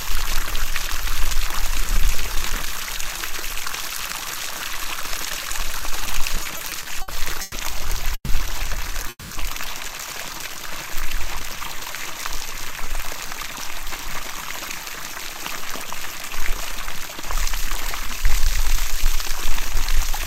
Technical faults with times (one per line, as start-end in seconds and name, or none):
6.43-7.55 repeated stalls (stutter)
8.15-8.31 call audio freeze
9.09-9.33 call audio freeze
12.54-16.80 jitter buffer speed-up